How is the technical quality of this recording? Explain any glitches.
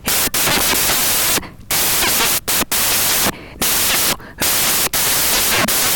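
Poor: loud noise runs over the speech for the whole recording. Samples built from the wrong bytes run throughout: misassembled bytes turn fast-changing low bits into large values, giving harsh broadband noise.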